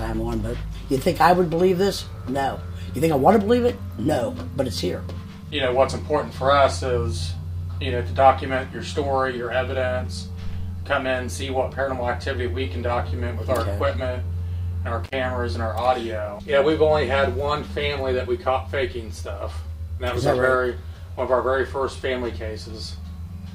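The audio suffers a single dropout from an intermittent contact between 15.04 and 15.13 s. For about 56 ms the signal path is broken, as a loose plug or cable conductor briefly loses connection, so the programme disappears rather than fading. Small crackles mark the moments the contact opens and recloses, and during the gap a faint hiss remains, the residual noise of the circuit with no signal arriving.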